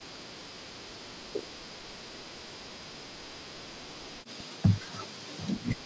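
A speech recording, band-limited to 8 kHz by call microphone processing. From 1.16 s to the end, the voice dips and breaks up, by roughly 40 dB at worst. The likely cause is speech suppressed in double talk.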